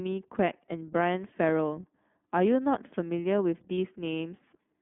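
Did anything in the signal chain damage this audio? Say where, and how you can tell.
Yes. At the codec stage, iLBC coding is audible throughout. The band stops near 3.5 kHz. The sound is rough and synthetic, which fits the 13.33 kbps, 30 ms mode.

At the network stage, there are lost iLBC frames from 3.75 to 3.78 s. A brief buzzy held vowel replaces the audio. This fits one lost 30 ms frame concealed by pitch repetition.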